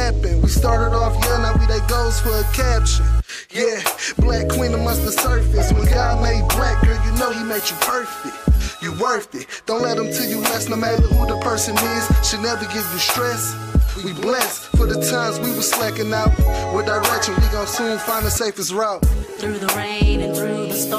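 Listening closely turned up nothing that stood out as a technical problem anywhere in the audio.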